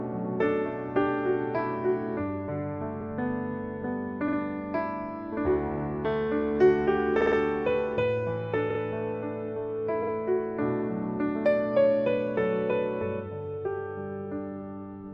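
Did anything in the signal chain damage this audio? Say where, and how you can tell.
Yes, there's repeated frames damage at the codec/storage stage. You get short stutters at 3.00, 4.27, 7.20, 8.69 and 10.02 s, where a roughly 46 ms slice plays again, once at 3.00, three times at 7.20 and twice elsewhere. That block length fits a run of two to five compressed frames being written or sent again. The decoder just plays them back, so the audio runs about half a second longer.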